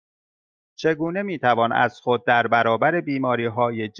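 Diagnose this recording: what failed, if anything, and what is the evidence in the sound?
Nothing in this short speech recording points to a failure at any stage; every part of the chain seems to have done its job.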